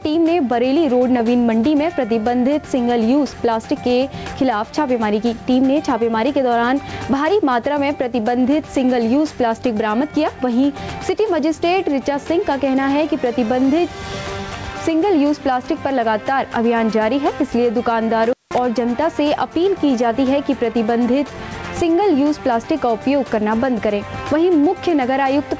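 The whole clip has gain pumping, with the gain swinging by around 10 dB. Loud and soft passages end up squeezed close together, so everything sounds flattened. The likely cause is input gain set far too high for the mic, with a fast limiter or compressor yanking the level down on every loud sound.

At 18.24 s there's an intermittent contact that lasts until about 18.58 s. It sounds like a loose cable or plug briefly losing connection. The audio drops out for roughly 181 ms with a crackle as it breaks and another as it comes back, and faint hiss fills the gap while the line is open. Through all of this, the top end stops at 8 kHz, which fits a G.722 call path at 64 kbps.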